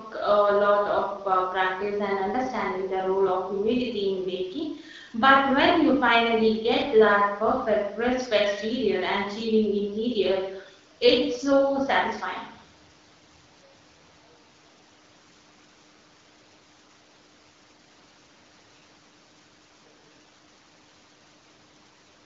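No faults heard; the speech runs over the AMR wideband (HD Voice) codec at 12.65 kbit/s, the rate from which AMR-WB stays clear, with only light coding wear.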